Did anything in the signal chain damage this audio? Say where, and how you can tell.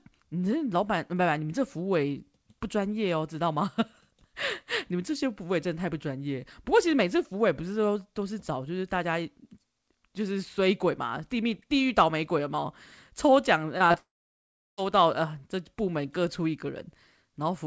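Yes, at the network stage, in a tight cluster around 14 s. The first fault is short concealed packet loss at 13.78–13.82 s, 13.88–13.92 s and 13.92–13.96 s. Each is a brief smear or wobble about 20 ms long, which fits single lost 20 ms packets. The jitter buffer ran dry and the decoder carried the previous sound forward, pitched if voiced and as shaped noise if not, before blending back into real audio.

Straight after comes a long network dropout from 13.98 to 14.79 s, about 800 ms missing. The concealment buzz or hiss fades quickly, and then about 0.72 s of silence follows before audio resumes. What was in that gap is simply absent, not delayed. The likely cause is a burst of lost or late packets too long for the receiver to bridge. Through all of this the call codec holds its band limit, with nothing above 8 kHz, which fits a wideband codec such as G.722.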